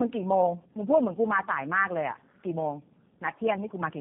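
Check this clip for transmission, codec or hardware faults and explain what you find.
The speech suffers from tandem speech coding across the whole recording. It passed through several speech coders in series, likely three of them, with the character pointing to G.729A in the chain. Each stage re-encodes audio the previous one already degraded, so the errors stack. The result sounds rough, muffled and warbly. On a spectrogram, energy stops sharply at 3.8 kHz and the harmonic bands look smeared and unsteady rather than clean.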